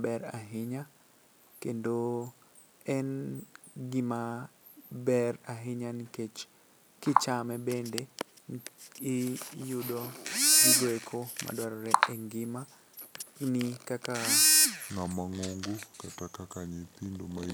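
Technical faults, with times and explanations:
14.9 to 17.54 s: section at the wrong speed. From here to the end the speech runs at 0.78 times normal speed, so it drags and drops roughly four semitones, deep and sluggish. That stretch was likely played back against the wrong clock.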